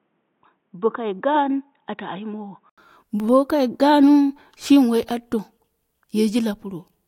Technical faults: input switched to a poorer device

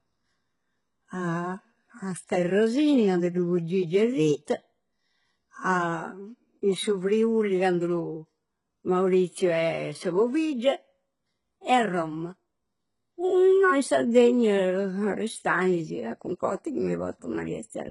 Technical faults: HE-AAC compression

